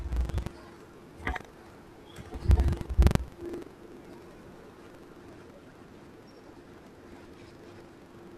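Right from the start and all the way through, the speech carries buffer tearing: a coarse, robotic rattle at about 23.4 Hz, which fits a 2048-sample buffer. The writer and the playback hardware have drifted out of step, so inside each buffer roughly a tenth of the audio is stale, about a tenth of a second old, spliced in with hard edges. That's why the buzz rides on the speech and drops away in the gaps.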